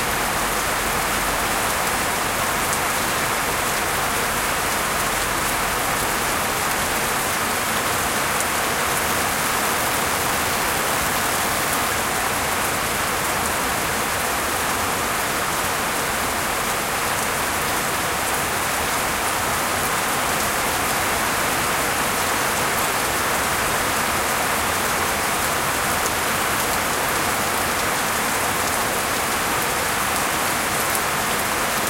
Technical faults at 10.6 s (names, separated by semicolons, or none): unreliable data bit